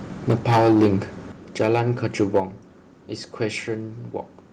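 A harsh, crackling edge runs through the speech from 0.28 to 0.94 s, with the loudest syllables sounding flattened and gritty. This is microphone overload. The input is driven roughly 12 dB past full scale, so a large share of the waveform, around one sample in seven, has its peaks sliced off by the converter. The likely cause is an input volume set far too high for the talker. Shorter, milder bursts of the same distortion return at 1.61 to 1.8 s, about 3 dB over with only a few percent of samples clipped, and at 2.2 to 2.4 s, about 5 dB over.

The level also drops abruptly three times, with the speech and the background falling together. The first is a slight dip of about 2 dB at 0.31 s. The second, at 1.32 s, is a much bigger step of about 7 dB. The third comes at 2.4 s, about 6 dB, right as the last distorted burst ends. Each is likely the microphone volume stepped down by the call software's automatic gain control, which reacts to the clipping by cutting the device's input volume in one jump rather than a smooth fade.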